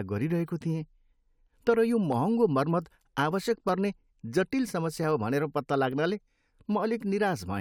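At 2.12 s, between "तर यो" and "महँगो मर्मत", and again at 3.69 s, the speech carries a single sharp click. Each is likely dropped samples: well under a millisecond of the stream goes missing, so the waveform jumps abruptly to a later value.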